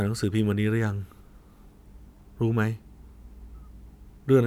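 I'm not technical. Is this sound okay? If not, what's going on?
Yes, nothing in this recording points to a technical problem with how the sound was captured, processed or delivered.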